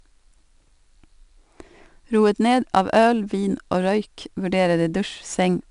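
Speech throughout carries 4-bit ADPCM compression: a gritty hiss rides on every loud syllable and tracks its level, with roughness on sharp onsets where the adaptive step lags. Nothing is heard above 10.6 kHz, which fits a 22 kHz sample rate at about 88 kbps.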